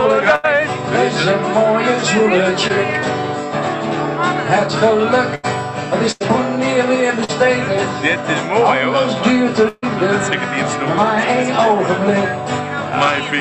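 A burst of packet loss first strikes at 0.35 to 0.45 s: about 80 ms of audio never arrived, so the receiver stretched the last sound into a fading buzz or hiss, then jumped ahead. On a spectrogram this shows as frozen, smeared harmonics dimming toward a clean cut.

A short concealed packet loss follows at 2.67 to 2.71 s. About 20 ms went missing and was patched by extrapolation, leaving a brief wobble, visible as a slightly blurred sliver in the spectrogram.

Further burst losses come at 5.35 to 5.45 s and 6.11 to 6.22 s, each losing about 80 ms and showing the same frozen, decaying waveform followed by an abrupt resumption.

A second short concealed loss at 7.24 to 7.30 s covers about 40 ms, heard as a quick smear where a short sound may drop out.

The longest burst runs from 9.68 to 9.84 s. About 140 ms is missing, and it is filled throughout with a held, fading buzz or hiss rather than silence, so it appears as an extended flat, dimming band.

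The call path itself places the audio under a ceiling near 8 kHz, which fits an Opus setting around 40 kbps.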